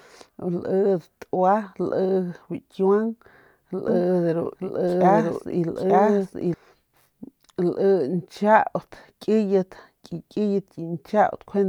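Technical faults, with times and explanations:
3.88–6.54 s, doubled audio track: a second full-band copy of the speech runs about one second behind at roughly equal level, with no decay or room colour, and cuts in and out abruptly. This is likely a slower second capture path mixed in.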